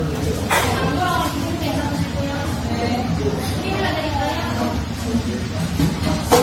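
Generation loss runs through the whole clip: the sound is swirly, smeared and hollow, with blurred attacks and nothing above 16.6 kHz. This is likely from repeated AAC-LC re-encoding, around five passes, four at 64 kbit/s and a last one at 88 kbit/s. Each pass requantises on a shifted frame grid, so noise and spectral gaps compound. A single encode at that rate would show far less accumulated swirl and hollowness.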